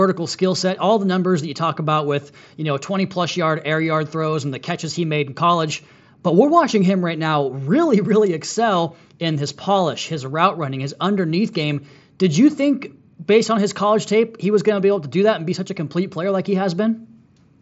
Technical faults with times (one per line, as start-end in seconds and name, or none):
none